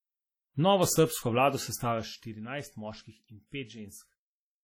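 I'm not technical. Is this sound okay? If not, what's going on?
No. The speech carries heavy compression damage from start to finish, most likely from WMA compression, the Windows Media Audio format. It stores sound in long chunks, and squeezing it this hard smears the leftover error across tens of milliseconds and throws away the quietest detail, with nothing kept above about 17 kHz. You hear a ringing, washy quality and a hiss that swells and shrinks with the speech. That rise and fall alongside the speech is what sets it apart from ordinary background noise.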